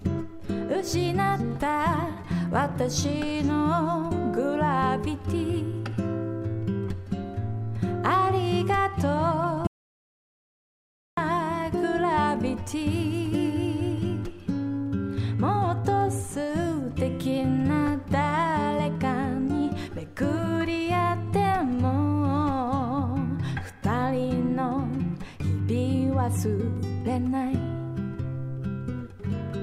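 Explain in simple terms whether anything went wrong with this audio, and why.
An audio dropout to silence runs from 9.67 to 11.17 seconds, about a second and a half. The sound stops mid-flow and the gap is completely dead, with no faint background hiss or room sound at all. The likely cause is that the input was briefly lost, for instance through a loose connection, a failed link or an accidental mute, while the recorder kept writing pure silence. Whatever happened during that stretch was never captured.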